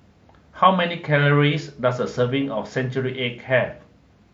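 No technical faults are audible anywhere in the recording.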